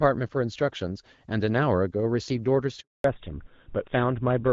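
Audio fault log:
2.80–3.04 s, handover gap: the sound cuts off and stays silent for 240 ms. No speech frames arrived while the call switched networks.
3.04 s to end, fallback to narrowband: nothing above 4 kHz remains. Speech turns dull and rough as clear HD Voice gives way to an older codec.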